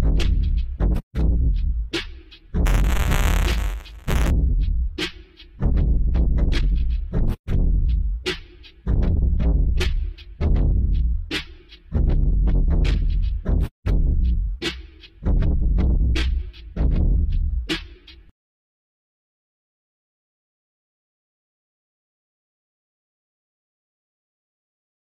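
A recording of sounds with buffer tearing from 2.65 s to 4.31 s: a steady robotic rattle at 200 Hz rides on the signal for that stretch. The rate points to a playback buffer period of about 5 ms in which the application's writes and the hardware's reads have drifted into collision. In each period a small slice, a few percent, still carries audio from about 20 ms earlier, spliced in with abrupt joins at both edges.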